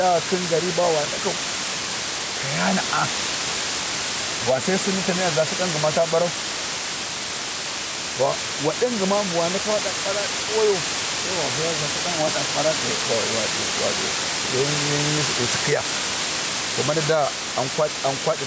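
A speech recording runs with two faults from start to finish. The first is low bit depth with dither. The hiss is steady and even, and it sits at about the same level as the speech. That fits a signal rounded to only 4 bits. Noise was mixed in before the rounding, so the coarse steps turn into flat white noise. There is no grainy distortion, just a constant, loud hiss. The second is gain pumping. The swing is a few decibels. Loud and quiet parts sound pressed together. The likely cause is input gain set far too high, with a fast limiter or compressor pulling it down on every peak. The call microphone processing leaves nothing above 8 kHz, and the faint room noise sits well below the speech.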